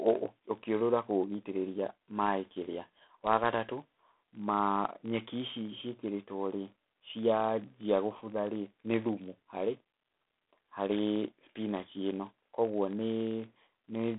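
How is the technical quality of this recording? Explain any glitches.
The recording is poor, with two faults running through all of it.

Block size mismatch (padded), throughout: one stage hands over blocks slightly shorter than the next stage reads, which fits a 1024-sample read block, and each shortfall is filled with silence. Those tiny gaps repeat at 46.9 Hz and produce a steady low buzz. The timing runs at 0.999 of normal speed.

G.726 ADPCM, throughout: at 24 kbit/s the codec spends only a few bits per sample on the difference from its adaptive prediction. That leaves plainly audible quantisation noise, a harsh rasping hiss that rises and falls with the speech level. The telephone-style band spans 250 Hz to 3.6 kHz, with nothing above 3.8 kHz.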